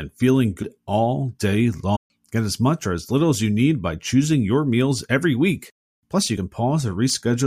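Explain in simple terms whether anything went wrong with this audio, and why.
Something did go wrong: the speech has three spots where compressed frames were skipped, at 0.62 s, around 1.95 to 1.97 s, and at 6.36 s. At each one, a chunk of the encoded audio never got played, so the speech jumps forward, losing about a fifth of a second, then closer to a third, then just a sliver. The size of the jumps fits frames of roughly 26 ms.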